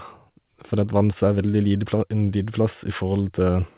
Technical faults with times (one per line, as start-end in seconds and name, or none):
0.00-3.77 clock drift between sender and receiver
0.29-3.63 repeated timing corrections